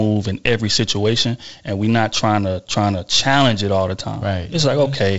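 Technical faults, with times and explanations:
No technical faults; the speech carries wideband G.722 telephone coding in its 48 kbit/s mode, with nothing above about 7.7 kHz and a faint upper-band hiss.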